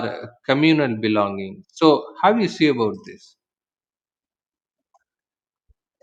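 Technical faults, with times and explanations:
Nothing stood out on listening to this speech recording.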